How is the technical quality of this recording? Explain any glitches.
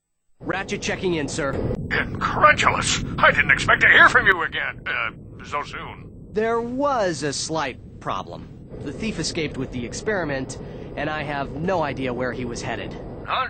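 The recording has one clear glitch. From 1.53 s to 4.32 s the level jumps up by about 10 dB, and the background noise rises with the sound, then both drop back at 4.32 s. Because signal and noise move together, this is a sudden gain jump rather than a change in the source. The likely cause is a digital gain setting being applied instantly, from one sample to the next, with no ramp to smooth the transition.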